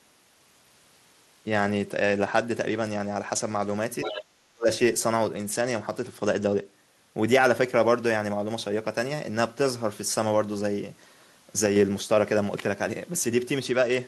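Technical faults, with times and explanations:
0.34–3.77 s, 5.34–6.73 s and 13.66–14.07 s, Bluetooth SBC bit pool drop: the treble goes dull and a gritty grain rises under the speech. This fits the link cutting the SBC bit pool from 31 to 12, near 88 kbps, which starves the upper sub-bands and coarsens the rest.
4.02–4.23 s, other side's voice leaking through: a second voice surfaces briefly at about 10 dB below the talker. This is likely loudspeaker playback that the echo canceller left partly in the microphone signal, so a scrap of the far end comes back.
4.05–4.69 s, speech suppressed in double talk: the talker's speech dips sharply for around half a second, falling by about 40 dB at its deepest. This is likely the echo canceller treating both sides at once as echo and turning everything down.
11.66–11.76 s, sudden gain jump: speech and background noise step down together by 4 dB with no fade. 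This is likely a digital gain setting applied instantly instead of ramped, so the level change lands between one sample and the next.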